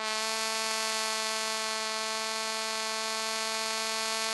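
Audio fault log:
Nothing to flag in this bit of music; there's no fault to log here.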